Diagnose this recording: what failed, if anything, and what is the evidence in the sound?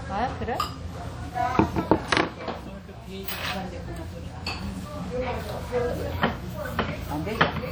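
The failure sits at the codec stage, throughout the clip: the sound carries plainly audible damage of the kind WMA compression produces, and that is the likely cause. The sound is smeared by a ringing, washy halo spread over tens of milliseconds, and a hiss rises and falls with the signal. The damage fits a bitrate around 48 kbps. Content still reaches about 20.1 kHz, so this is block quantisation noise, not a band-limiting low-pass fault.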